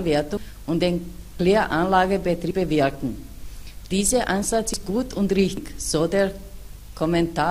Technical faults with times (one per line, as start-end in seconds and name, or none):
0.37 dropped buffer (overrun)
1.39 dropped buffer (overrun)
2.51 dropped buffer (overrun)
4.74 dropped buffer (overrun)
5.57 dropped buffer (overrun)